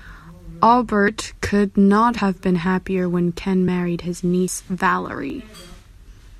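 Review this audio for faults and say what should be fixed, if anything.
Abrupt forward jumps in the speech occur at 1.08, 2.18, 3.68, 4.48 and 5.3 s. The first falls just before "could not", and the second falls between "could not" and "been happier when". There is no silence at any of them. The jumps at 2.18 and 4.48 s skip roughly 70 ms, and the others skip about 20 ms. The likely cause is a dropped buffer (overrun), where the hardware overwrote captured samples before they were read. To prevent this, enlarge the capture buffer and give the recording thread higher scheduling priority.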